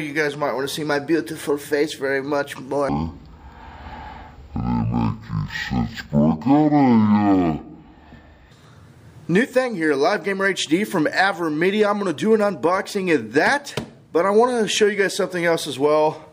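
From 2.89 to 8.51 s it's stereo read as mono: interleaved left and right samples run as one channel, so the sound drags at half speed, an octave low.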